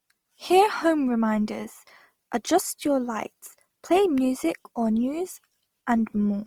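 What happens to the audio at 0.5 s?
The speech at 0.5 s sounds rough and grainy, as it does throughout the clip, likely from Opus compression in music (CELT) mode at a rate around 24 kbps. Starved bands are filled with folded or noise-like energy, so a spectrogram shows few holes, hazy texture and content up to about 20.3 kHz.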